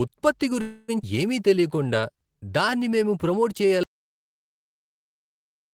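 A speech recording carries four network and capture faults. Between 0.61 and 0.90 s there is a call audio freeze, most likely because packets were held up in transit and the receiver's jitter buffer ran dry. With nothing new to play, the receiver stretched out the last sound it had for about 270 ms, which comes through as a fading buzzy continuation instead of speech. Once the packets arrive, the talk resumes exactly where it stopped, so nothing is lost, but everything after it now runs about 270 ms late. At 1.02 to 1.05 s comes a skip ahead. Here a stretch of audio was discarded, either in transit or by the jitter buffer shedding excess delay while later audio was already queued. Roughly 150 ms of speech disappears, and the two sides are butted together with only a few milliseconds of fill, so the sound jumps forward abruptly. From 1.49 to 2.96 s a jitter buffer slow-down follows, as the buffer rebuilds its reserve by repeating single pitch periods and slivers of pauses. 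That adds 163 ms and plays the passage at about 89% speed with the pitch unchanged, so sounds come out drawn out. At 3.83 s an audio dropout to silence sets in and lasts to the end. The input was likely lost through a disconnected device, failed link or accidental mute, and the recorder kept writing silence. The speech cuts off mid-flow into silence with no room tone at all.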